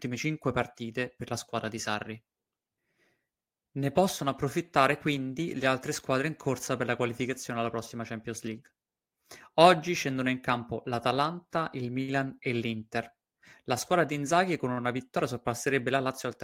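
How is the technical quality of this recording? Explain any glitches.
One glitch stands out in the speech. At 12.02 to 12.11 s, a short stall from a late packet: the jitter buffer ran dry, so about 60 ms of sound was stretched, briefly held with a faint buzz or dip, then resumed with nothing lost.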